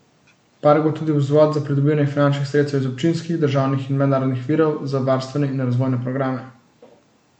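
From start to finish the speech carries plainly audible MP3 compression artefacts: a watery, swirling texture as weak frequency components drop in and out between frames, and smeared consonant attacks. This likely comes from an encoder starved of bits, consistent with roughly 64 kbps.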